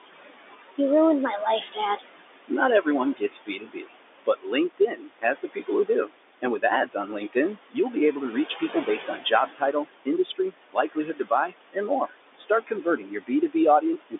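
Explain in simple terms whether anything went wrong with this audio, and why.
The noise suppressor is working too hard throughout, producing noise suppressor artifacts: the room noise drops away between phrases and returns underneath them.

It also causes speech cut by the noise suppressor, mistaking parts of the speech for noise. From 1.32 to 2.01 s, 3.17 to 3.95 s, 4.26 to 7.36 s and 8.49 s to the end, bits of speech get turned down, sounding swallowed or faint, with the later stretches hit hardest.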